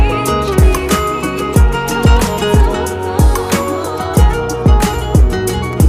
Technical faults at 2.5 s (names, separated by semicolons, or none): none